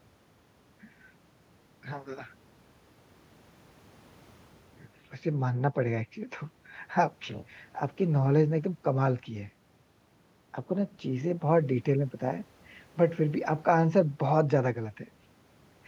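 No technical faults are audible anywhere in the recording.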